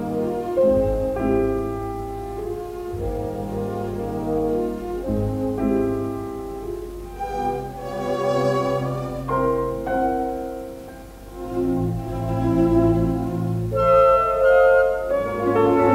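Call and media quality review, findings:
No signal-path faults found across the clip; level, continuity and timing of the audio stay stable throughout, with no defects attributable to capture, transport or playback.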